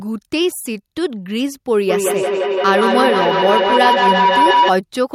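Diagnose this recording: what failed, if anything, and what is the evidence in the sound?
What failed is an acoustic loop around the call path: a feedback howl runs from 1.9 s to 4.75 s. A tone near 1 kHz swells until it sits about 3 dB above the speech, pulsing roughly every 150 ms. That pulse is the loop's round-trip delay. Two devices in the same room keep feeding each other's loudspeaker output back into the microphones. Each pass adds gain at that frequency, so it grows rather than decaying, until the loop breaks.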